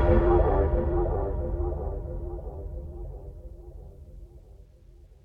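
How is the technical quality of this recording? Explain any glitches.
No technical glitches can be heard in the recording, and the audio signal stays stable and intact throughout.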